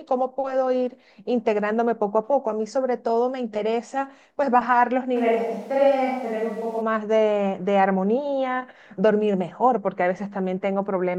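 From 5.17 s to 6.80 s the speech abruptly turns roomy and hollow, thinner in the bass, with background noise sitting roughly 35 dB below it, though the level barely changes. This is likely a switch to a distant microphone, the close microphone's signal dropping out before returning.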